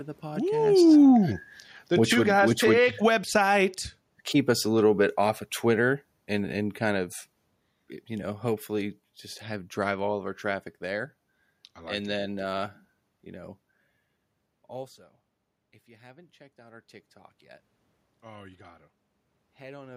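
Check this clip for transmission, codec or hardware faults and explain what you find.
One fault is present, an automatic gain falling. From 0.34 s to 10.25 s, the automatic gain control judged the input too loud or its background noise too strong and slowly pulled its gain down by about 15 dB. The level starts strong and then sinks. Unlike a talker moving, which happens here around 0.5 s and 14.5 s, the room noise drops along with the voice.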